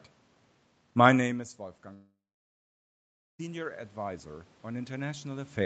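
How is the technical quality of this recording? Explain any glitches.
The recording has two clear glitches: a slow level swell and a long gap in the middle of the speech.

Automatic gain rising, from 0.98 s to the end: the input fell by about 18 dB as the talker moved back, so the gain control slowly raised its gain to compensate. Voice and room noise swell up together over the following seconds, not snapping back at once.

From 1.93 s to 3.41 s the sound breaks off: the last sound is stretched into a fading buzz, then about 1.2 s of near-silence follows before the audio resumes, skipping roughly 1.46 s of material. The likely cause is a long network dropout, where packets stopped arriving and the receiver filled the hole.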